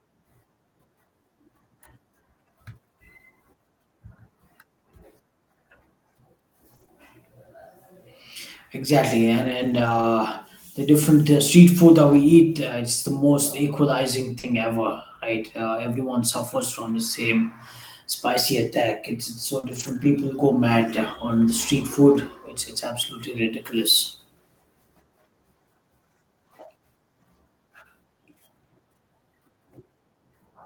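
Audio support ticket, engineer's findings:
Scattered short gaps, 6.73–14.65 s: about three brief ticks and smears, longest around 40 ms, in jitter buffer concealment. Spread-out isolated hiccups, unlike one continuous dropout.

Short concealed packet loss, 19.59–19.65 s: a 40 ms smear where the decoder extended the last sound. Smooth continuation, not a rougher substitute frame.

Lost packet rebuilt from error correction, 19.63–20.09 s: no gap, but about 240 ms of rougher, noisier audio from the Opus in-band FEC copies. Degraded texture rather than a smeared hole.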